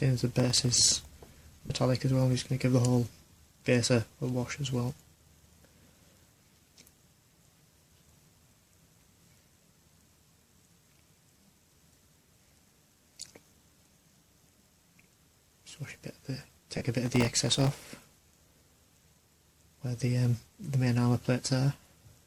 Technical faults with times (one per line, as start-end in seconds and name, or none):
0.31-1.11 processor overload crackle
1.66-1.70 lost LE Audio frames
16.77-16.81 lost LE Audio frames
17.06-17.81 processor overload crackle